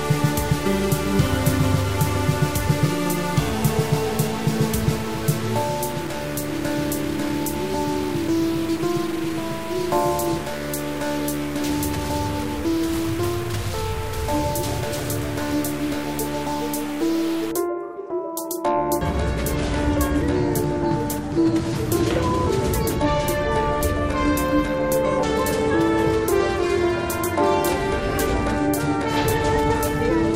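From the start until about 17.5 s the audio carries a harsh, buzzy distortion that rides on the waveform, and the quiet gaps are not silent but filled with a gritty noise floor at around -30 dBFS. The likely cause is a stuck bit: one data bit held at a fixed value, so roughly half the samples are shifted by that bit's weight. Near zero, the error flips with the signal's sign and turns pauses into noise.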